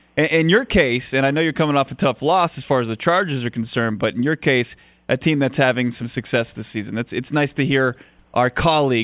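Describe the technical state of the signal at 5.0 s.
At 5.0 s the speech signal is intact, with no fault audible at that moment.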